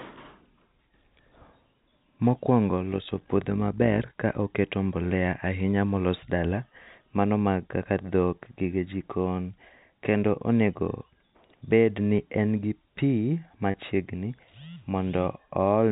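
From 2.92 to 4.12 s there's overlap-add ripple: the frames were rejoined with overlaps that don't sum evenly, so the level pumps by about 6 dB around 50 times a second, giving a rough, robotic flutter. Then at 13.71 to 13.74 s comes packet loss with pitch repetition. About 30 ms, which sounds like a single packet, drops out, and the last pitch cycle is looped to fill it, so you hear a brief buzzy hold over the 4 kHz-limited telephone band.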